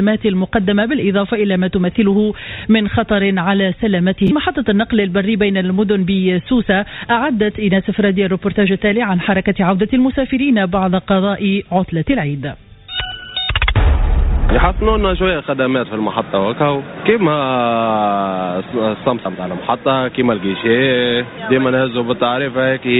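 Chunks out of order at 4.27 to 4.29 s: one 10 ms slice of audio arrives a single chunk late and plays after the slice that should follow it. Nothing is lost, but the swapped pair leaves three hard joins, heard as a brief jumbled stutter. The audio also passed through a call path, and nothing above 4 kHz can be heard, a narrowband coding sound that fits G.711 mu-law at 64 kbps.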